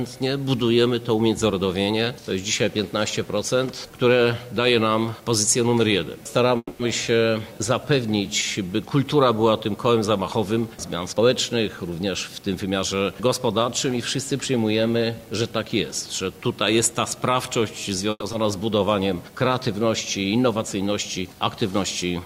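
A call audio freeze at 6.57 to 6.81 s and again at 18.10 to 18.24 s sounds like the last sound continuing as a fading buzz or hiss, ending in about 40 ms and 30 ms of silence. The likely cause is held-up packets draining the jitter buffer. The audio then resumes where it stopped, inserting gaps of 220 ms and 120 ms with nothing lost.

A jitter buffer speed-up from 11.12 to 12.94 s runs the sound at 111% without changing pitch, sounding hurried, as the receiver trims pitch-period slices totalling about a fifth of a second to cut the built-up delay.

A short concealed packet loss at 18.32 to 18.35 s leaves a brief smear where 40 ms never arrived and the receiver extended the preceding sound over the hole before blending back.

A jitter buffer slow-down from 18.42 to 18.79 s then stretches the sound to 92% speed at the same pitch, repeating pitch periods to add 37 ms and build up the buffer's reserve.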